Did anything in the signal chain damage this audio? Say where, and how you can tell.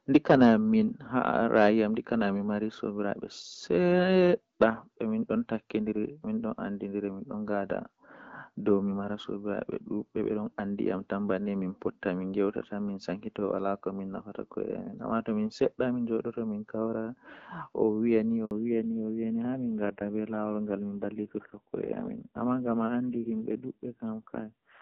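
Yes. At 18.45 s the network stage produces a handover gap: the call is passed from one cell or radio link to another, and no speech frames arrive during the switch. The speech dies away and stays silent for 60 ms, until the new link begins carrying audio at 18.51 s. Whatever was said in that window is simply missing and is not smeared or repeated, which is the signature of frames that never arrived rather than of a decoder fault.

Right after the gap, at 18.51 s, the codec stage shows a fallback to narrowband. The new link no longer carries HD Voice, so the call switches from AMR-WB at 12.65 kbit/s to AMR-NB, at a rate that points to 5.9 kbit/s. From there to the end, nothing reaches above 4 kHz. The speech turns dull, boxed-in and rougher. Before 18.45 s the wideband codec leaves only light coding damage and keeps the upper band present.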